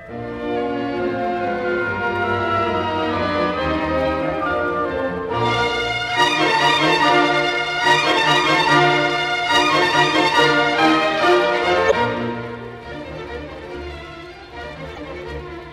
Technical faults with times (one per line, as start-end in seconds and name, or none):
11.87-11.93 damaged data in a compressed stream
14.93-14.99 damaged data in a compressed stream